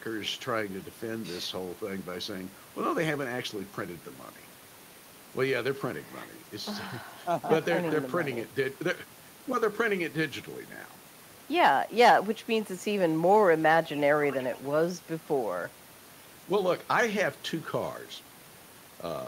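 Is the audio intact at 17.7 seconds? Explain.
Yes, the speech at 17.7 seconds plays through intact, with no dropout, click, distortion or other fault at that moment.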